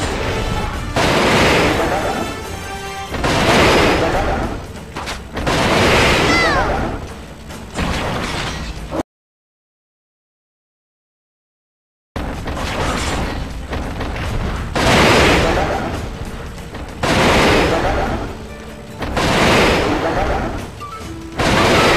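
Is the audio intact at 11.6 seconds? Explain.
No. At 11.6 seconds the clip is inside an audio dropout to silence running from 9.01 to 12.16 s, about 3.1 s in all. The sound cuts off abruptly, leaves total silence with no room tone, then resumes mid-flow. The likely cause is that the input was lost while recording continued, writing silence. On the waveform this shows as a flat line; on a spectrogram, a dark vertical band across every frequency.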